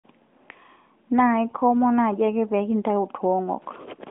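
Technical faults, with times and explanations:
1.48 to 1.57 s, AMR bit errors: a brief hoarse, gargly roughness just before "komon naaji ake pee", as flipped low-priority bits misplace excitation pulses and skew gain; spectrogram shows smeared, noisy harmonics.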